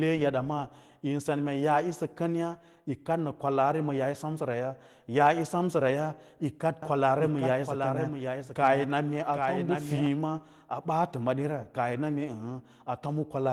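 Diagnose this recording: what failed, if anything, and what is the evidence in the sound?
Doubled audio track, 6.82 to 10.06 s: a copy about 5 dB quieter trails roughly 0.7 s behind, likely from a slower second capture path; the spectrogram shows shifted, abrupt-edged repeats.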